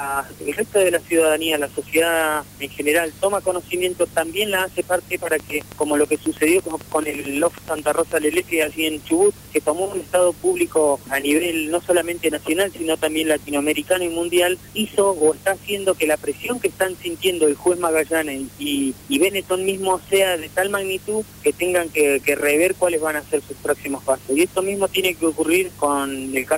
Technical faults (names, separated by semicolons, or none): train of clicks